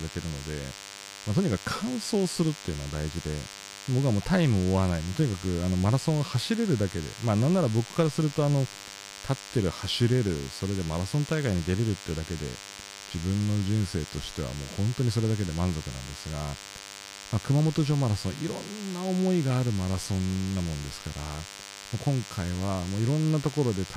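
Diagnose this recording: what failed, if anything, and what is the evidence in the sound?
DECT cordless phone buzz in the analogue wiring: a thin, steady 100 Hz buzz sits fairly prominently under the speech throughout, from a nearby DECT set's 10 ms bursts being rectified.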